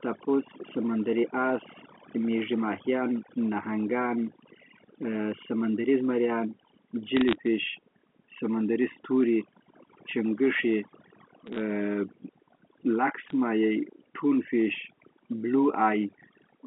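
From start to end, overdone noise removal has been set so strong that it switches off individual frequency bands near its noise estimate. The background drops and breaks up into twinkling specks. Unlike plain low-level hiss, these artefacts flicker band by band. Bit errors on a digital phone line then crackle from 7.17 to 7.35 s, 11.46 to 11.60 s, and 13.29 to 13.33 s. At a rate of a few tenths of a percent, each flipped bit corrupts a single sample, and a hit on a high bit or on the sign of a loud sample produces a sharp tick. The speech around the ticks stays unchanged and within the line band of the G.711 telephone coding, which sets the errors apart from dropouts or packet loss.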